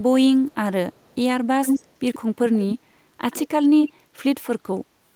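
Echo leak at 0.47–0.55, 0.93–1.15, 1.64–1.89, 2.14–2.19, 2.59–2.75, 3.31–3.43 and 3.83–3.92 s: scraps of the speech return about 141 ms late, then 121 ms, from faint to as loud as the speech itself, likely a far-end echo canceller passing through what its loudspeaker fed its microphone.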